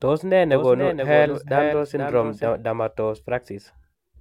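From 0.52 s to 2.48 s the speech carries a doubled audio track: a second, full-band copy trails the original by about half a second, sitting around 5 dB lower. It has no reverberant tail or room colouring, so it reads as a clean overlapping repeat rather than an echo, and it cuts in and out abruptly at both ends. The cause is likely the same signal reaching the mix twice through a slower capture path.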